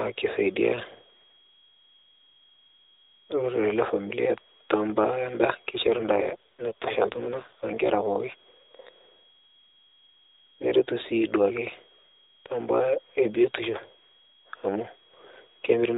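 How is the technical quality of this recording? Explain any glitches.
The recording has one clear glitch, heard through the band-limited, slightly coded sound of a narrowband mobile call with nothing above 4 kHz.

AMR rate drop, 5.84 to 8.03 s: for about 2.2 s the codec steps down to a lower mode, which fits a drop from 12.2 to 5.9 kbps, spending bits on error protection. With fewer pulses per frame, the speech turns buzzier and more synthetic, without any gap or change in bandwidth, then recovers.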